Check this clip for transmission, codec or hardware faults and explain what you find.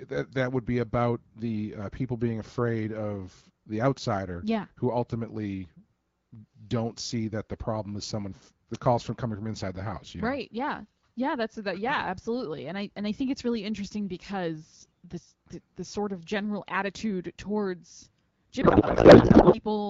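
One fault is present, near the end of the speech. Codec payload misread, 18.61 to 19.60 s, just after "of general attitude towards": the AMR-WB decoder misreads the frame fields, which fits octet-aligned packing read as bandwidth-efficient, so the speech becomes garbled, warbling noise.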